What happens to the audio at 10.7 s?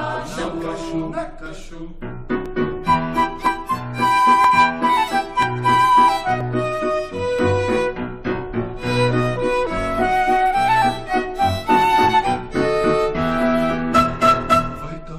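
Nothing goes wrong at 10.7 s; the audio plays through that moment intact, with no dropout, click or other fault.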